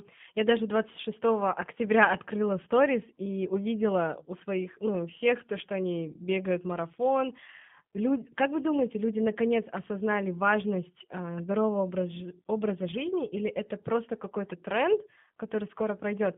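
Throughout, G.729 codec coding confines the speech to 150 Hz–3.5 kHz, a flat-topped spectrogram band, and its sparse-pulse 8 kbit/s excitation leaves it audibly rough and synthetic.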